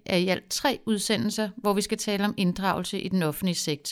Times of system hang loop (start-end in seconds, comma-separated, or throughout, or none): none